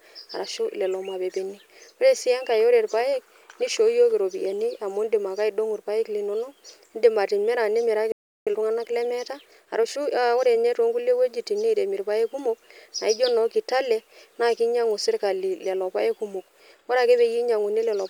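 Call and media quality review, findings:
Playback stall, 8.12–8.47 s: player likely starved of data or thread blocked; speech output cuts to silence for about 350 ms, then resumes.

Time-compressed catch-up, 8.47–10.77 s: player trims backlog by cross-fading out small segments; speech hurried to 1.15x at normal pitch, starting at "toonkulie wuejitin niremi".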